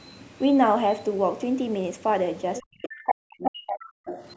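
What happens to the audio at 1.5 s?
Nothing goes wrong at 1.5 s: the speech there is intact, with only the call microphone processing's usual trimming of the lowest bass and nothing above 8 kHz.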